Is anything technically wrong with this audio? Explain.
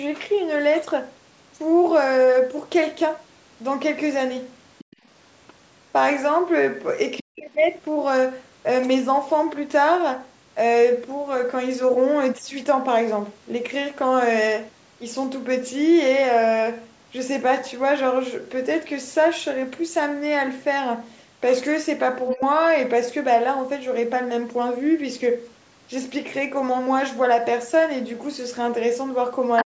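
Yes, there are three related echo-canceller problems in this speech.

Other side's voice leaking through: short scraps of a second voice show up at 4.78 to 4.96 s, 7.17 to 7.23 s, 22.30 to 22.34 s and 29.57 to 29.63 s. Most likely the far end was playing on a loudspeaker and the canceller didn't fully strip it from the mic. The first scrap sits well down, about 25 dB under the talker. The middle two are about 15 dB down, and the last one is loud, only about 5 dB below.

Background gated by the echo canceller: from 4.89 to 4.99 s, overlapping the end of that first leak, the room sound drops out for roughly 50 ms, by about 32 dB at its deepest. The canceller slammed the mic down hard while the loudspeaker was active and then let go, so you hear a brief hole in the background rather than a smooth level.

Speech suppressed in double talk: the talker's own voice dips at 7.20 to 7.49 s, 22.34 to 22.42 s, and from 29.63 s to the very end. 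Each dip follows straight on from a leak, so it's probably the canceller mistaking overlapping talk for echo and turning everything down. The first and last dips are deep, around 40 dB, close to a full cutout of about 300 ms and 100 ms. The middle one is a lighter dip of around 15 dB, lasting about 70 ms.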